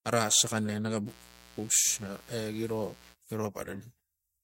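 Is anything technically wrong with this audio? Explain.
Yes. From 1.04 s to 3.16 s, mains buzz sits under the speech. Sharp switching spikes on 60 Hz power recur twice per cycle, spreading harmonics into the kilohertz range. It sounds like a steady, raspy buzz, roughly 25 dB below the speech.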